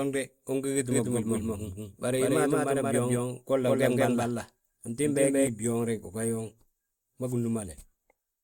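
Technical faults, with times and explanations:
0.91–5.47 s, doubled audio track: after "ungi giti" the speech gains a full-band echo trailing about a fifth of a second behind at roughly equal loudness, with no room decay, stopping abruptly before "hii bgooŋ reg ugan"; likely a second, slower capture path mixed in.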